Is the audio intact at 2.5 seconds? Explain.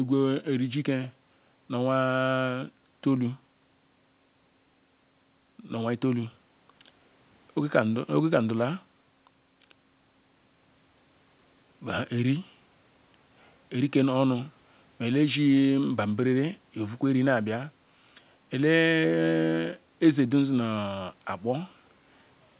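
Yes, the speech is intact at 2.5 seconds, with no fault at that moment.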